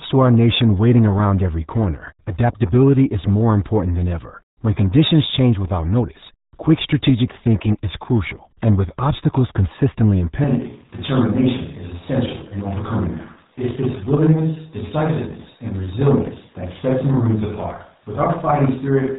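From the start the speech has the muffled, gargly sound of the RealAudio 14.4 codec, with nothing above about 3.8 kHz at 8 kbit/s, so the damage is heavy. At 10.44 s it suddenly turns roomy and hollow, drops by about 5 dB and picks up room noise, likely a switch to a distant microphone, and it stays that way to the end.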